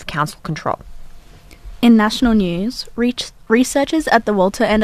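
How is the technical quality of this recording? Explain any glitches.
No glitches or technical faults can be heard here.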